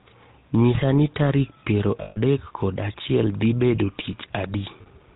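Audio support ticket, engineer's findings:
GSM full-rate codec, whole clip: buzzy, gravelly roughness on the speech, plainly audible. Spectrogram shows a hard ceiling at 4 kHz and coarse, smeared harmonics. Regular-pulse excitation with decimated residual, consistent with 13 kbps full-rate coding.

Lost GSM frames at 2.02–2.17 s and 4.82–4.87 s: metallic ring sustaining the last sound. Waveform shows a repetitive envelope; spectrogram shows frozen horizontal bands. Last good frame's parameters repeated during about 140 ms and 40 ms of loss.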